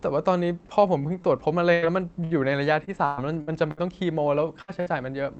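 From 1.15 to 3.8 s the speech turns choppy and robotic: repeated packet loss, with eight holes each patched by stretching the previous sound. About 17% of that stretch is filled in, the longest gap about 118 ms, so pieces go missing.

Then come two quick bursts of packet loss, at 4.62 to 4.71 s and 4.80 to 4.89 s. Each time the receiver holds the last sound for roughly 60 ms and fades it, leaving a brief buzz or hiss, and about 60 ms of speech is simply skipped.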